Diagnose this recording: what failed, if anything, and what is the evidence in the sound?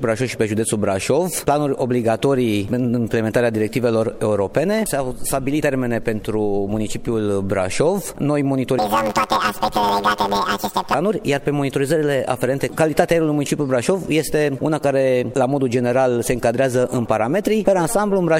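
From 8.79 to 10.95 s the sound turns into a robotic buzz near 92 Hz with no clear octave jump, which points to planar audio read as interleaved at the sample-format conversion stage. Each 10.88 ms block of left-then-right samples was misread as alternating pairs, replaying both halves at double speed.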